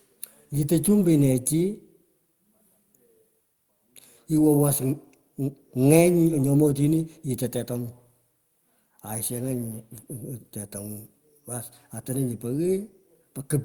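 No technical faults can be heard anywhere in the speech.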